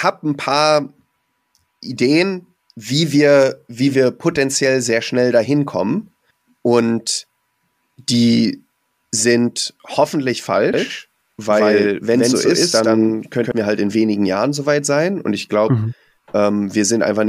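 From 10.74 s to 13.52 s, the speech is joined by a doubled audio track. A second full-band copy runs about a tenth of a second behind the first, at roughly the same loudness. It sounds like a clipped, flat echo with no decay or room colour. The copy appears abruptly at the start and cuts off abruptly at the end. The likely cause is a second, slower capture path or an edit that held two copies out of step.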